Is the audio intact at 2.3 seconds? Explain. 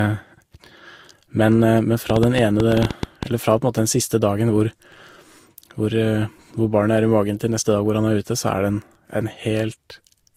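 No. From 2.10 to 3.24 s, just before "eller fra på", a train of clicks ticks over the speech at about 10 per second, irregularly spaced, peaking roughly 15 dB above the signal. The cause is likely interference or a faulty connection. A waveform shows about ten similar narrow spikes, and a spectrogram shows thin vertical broadband lines.

The moment also carries transcoding between lossy codecs. The audio was likely coded as Vorbis at 51 kbit/s and then re-coded as Opus at 48 kbit/s, so the second codec spends bits on the first one's artefacts and adds its own, and the two sets are heard together. Nothing lies above 20.1 kHz, so a spectrogram shows a cut-off only at that high point.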